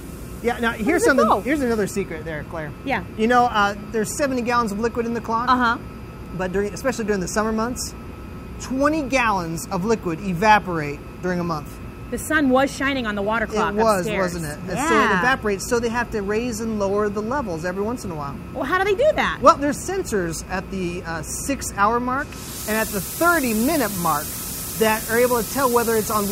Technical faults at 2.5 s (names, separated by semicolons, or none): none